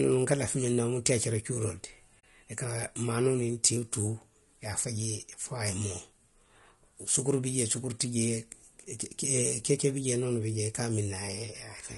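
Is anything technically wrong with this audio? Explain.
Yes, there are two faults. Throughout the speech there is plainly audible low-delay AAC compression damage: the voice sounds rough and grainy, with noise filling the gaps between harmonics and a thin, synthetic-sounding top band. The likely cause is AAC-ELD coding at a bitrate that sounds close to 32 kbps, where its short frames resolve pitch harmonics poorly. From 2.19 to 2.24 s there is AAC frame loss with muting, a soft-edged 40 ms dropout. The duration fits two lost frames whose spectrum the decoder zeroed, with the overlapping windows fading the sound out and back in.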